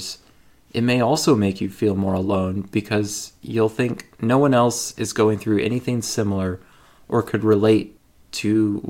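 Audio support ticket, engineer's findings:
No technical faults found in the speech signal; level, continuity and timing hold steady throughout the recording.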